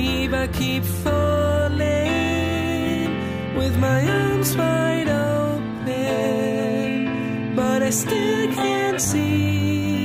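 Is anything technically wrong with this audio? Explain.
No, nothing is technically wrong with this audio.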